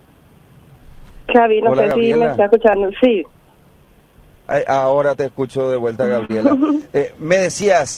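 The audio carries clock drift between sender and receiver throughout, with the sender's clock running roughly 3% slow, so the receiver's jitter buffer keeps draining and playback has to be padded out to stay in step. From 0.06 s to 5.59 s this shows as repeated timing corrections: the receiver inserts small repeated fragments all in the same direction, giving an effective playback speed of 97% and adding something like 150 ms in total, heard as faint, irregular hiccups and a slightly unsteady tempo. At 6.25 s to 6.31 s there is a short stall from a late packet. The buffer ran empty, and the receiver held the last sound for 42 ms until the packet arrived, then resumed from the same point. Nothing is lost, but the held sound has a slight buzzy or dipped quality, and overall delay grows by 42 ms.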